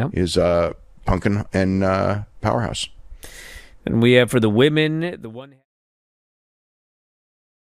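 No technical faults are present.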